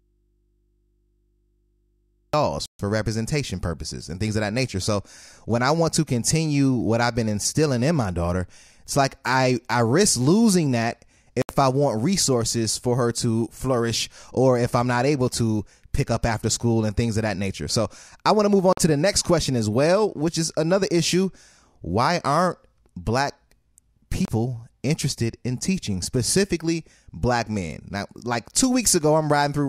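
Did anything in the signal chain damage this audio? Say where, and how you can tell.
Yes. The clip opens inside an audio dropout to a faint residue: from the start until 2.33 s the speech is missing and only mains hum remains, roughly 45 dB below the signal. This likely points to an interrupted analogue input left open. A spectrogram shows only thin hum lines, then speech starts abruptly.

There are four short Bluetooth stalls in the playback link, where the speech cuts to digital silence and resumes: 2.66 s (135 ms), 11.42 s (73 ms), 18.73 s (47 ms) and 24.25 s (29 ms). They are likely caused by the wireless buffer running dry. The waveform shows flat gaps, and the spectrogram shows empty vertical stripes.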